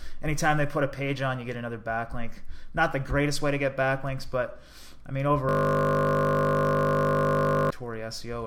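At 5.49 s the audio locks into a system hang loop that lasts until 7.70 s. The computer or its audio driver stopped delivering new data while the sound hardware kept replaying the same 20 ms stretch of its ring buffer, more than a hundred times. With so short a loop, it sounds like a steady 50 Hz buzz. A spectrogram shows evenly spaced harmonic lines at multiples of 50 Hz, and the waveform repeats an identical cycle.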